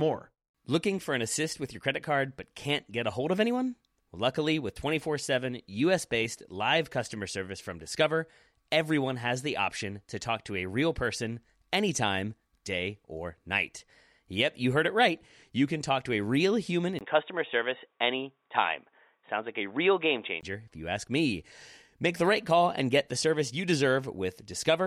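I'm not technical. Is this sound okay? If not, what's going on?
No. Right after "to a real human", at about 16.99 s, the sound turns dull and boxy, losing its upper crispness above about 3.8 kHz, with a split-second gap and a faint new background. That's an input switched to a poorer device, likely a headset or other microphone. Clarity returns at 20.43 s, before "if you ask me".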